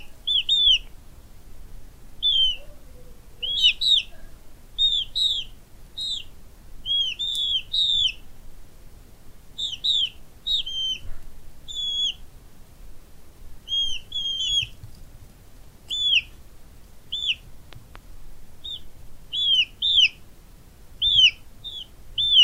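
A voltage pulse, likely a plug or switch glitch, enters the signal from 17.73 to 17.98 s, producing a loud pop: two thumps rising above the continuing sound.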